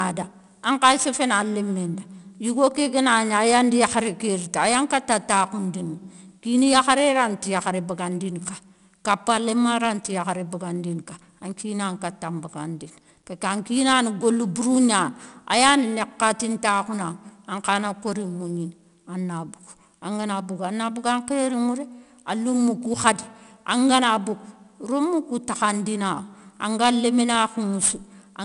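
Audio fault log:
Throughout, 4-bit ADPCM compression: 4-bit prediction steps leave gritty hiss riding every loud syllable, unlike steady background hiss, and nothing above 10.6 kHz dulls it.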